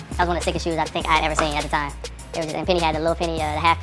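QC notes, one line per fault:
throughout: wrong sample rate. The samples are being clocked out half again as fast as they were captured, with no conversion, which fits 16 kHz material played at 24 kHz. Everything runs 1.5 times too fast and sits about 7 semitones high, so the sound is hurried and shrill.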